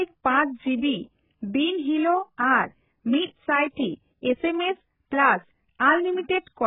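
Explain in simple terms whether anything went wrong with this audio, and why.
The speech sounds dull and muffled from start to finish. Nothing comes through above 3.8 kHz, so crisp sounds lose their edge and turn smeared. The likely cause is heavy AAC compression, which squeezed the file hard by discarding high sounds.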